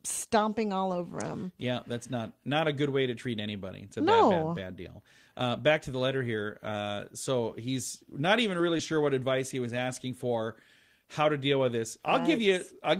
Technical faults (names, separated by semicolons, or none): lost packet rebuilt from error correction; short concealed packet loss